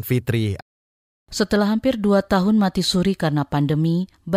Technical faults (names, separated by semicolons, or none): playback stall